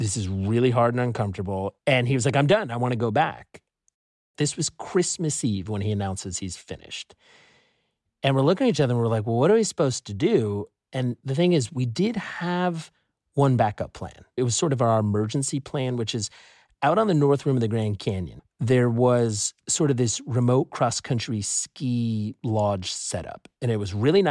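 Nothing technical goes wrong anywhere in this recording of speech; there's simply no fault to point to at any moment.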